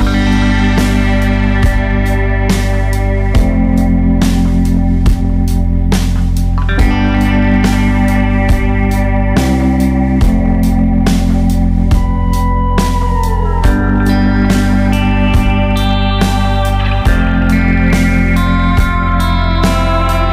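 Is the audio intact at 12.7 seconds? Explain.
No. At 12.7 s, as throughout the clip, hard clipping flattens the peaks: the signal is driven about 4 dB past what the stage can pass, so a few percent of samples are cut off, giving crackle on loud moments. The waveform shows squared-off tops; the spectrogram shows broadband harmonic smear on peaks.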